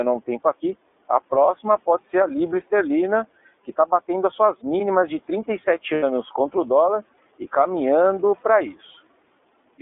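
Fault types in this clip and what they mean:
iLBC codec: throughout the clip, the speech is confined to roughly 250 Hz to 3.6 kHz and has a plainly audible rough, synthetic edge. Each frame's excitation is coded independently. The sound fits iLBC's 30 ms frame mode at about 13.33 kbps.
Lost iLBC frames: from 5.93 to 6.04 s, a 90 ms stretch is replaced by a held, slightly buzzy vowel-like tone. The decoder repeats the last pitch cycle mixed with noise. The gap fits three lost 30 ms frames, and the voice is right again almost at once afterwards.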